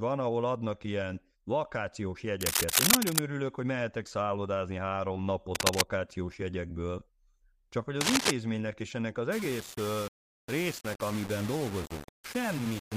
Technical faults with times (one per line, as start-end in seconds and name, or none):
2.41-3.19 cable scratch noise
5.54-5.82 cable scratch noise
8.01-8.31 cable scratch noise
9.32-12.97 low bit depth without dither